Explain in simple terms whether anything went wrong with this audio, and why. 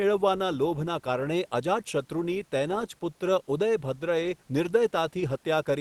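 Nothing went wrong: the speech came over an ordinary call connection, which trims off the very highest frequencies by design, and the faint room noise sits far beneath the talking.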